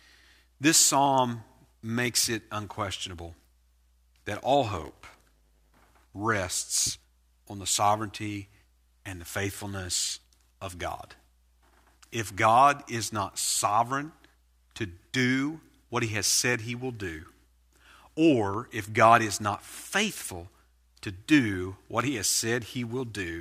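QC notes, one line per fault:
4.73–5.92 s, block size mismatch (padded): after "that all", the speech gains a 100 Hz buzz and slows to 0.919 times normal speed at about its normal pitch. Each short block is zero-padded to the longer read size, up to "rests on the sovereignty".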